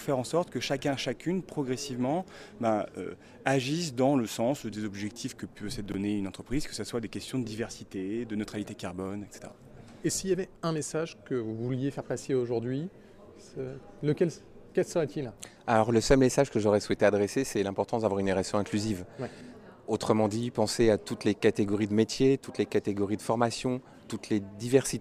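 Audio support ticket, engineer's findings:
Brief jumbled blip, 5.86–5.94 s. Chunks out of order: one 20 ms chunk played three chunks late, leaving three hard joins. Check buffer/queue ordering.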